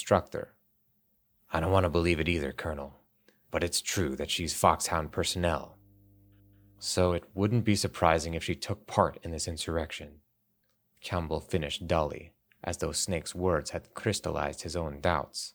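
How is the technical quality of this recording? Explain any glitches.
One glitch stands out in the speech. Mains hum runs from 4.84 to 6.92 s, between "it's true that she's" and "it wouldn't be surprising". Power-line coupling from a ground loop or transformer adds a steady 50 Hz tone around 30 dB below the speech.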